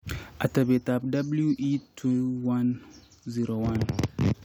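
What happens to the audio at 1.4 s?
Nothing goes wrong at 1.4 s; the speech runs through that moment intact, with no dropout, click or other fault.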